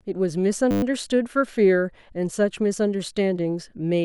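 Speech recording with a system hang loop from 0.71 to 0.83 s: a 10 ms slice of audio repeats 12 times, producing a steady 100 Hz buzz. The driver or host stalled while the hardware kept replaying its short ring buffer.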